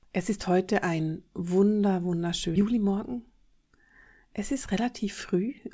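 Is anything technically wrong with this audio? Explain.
Yes, the speech has two faults, heard through a call path whose spectrogram is empty above 8 kHz, which fits the G.722 wideband codec.

Skip ahead, 2.56 to 2.66 s, right after "ist heute ein wunder": about a second of speech was dropped while later audio was already queued, so playback leaps forward with almost no gap. The waveform shows two unrelated segments butted together, and the spectrogram shows abruptly mismatched formants.

Jitter buffer speed-up, 3.16 to 3.76 s: the buffer held excess audio, so the receiver repeatedly removed pitch-period-sized pieces, a few tens of milliseconds in total, playing about 6 % faster at unchanged pitch. The speech sounds slightly hurried, and the waveform has occasional whole pitch cycles cut out.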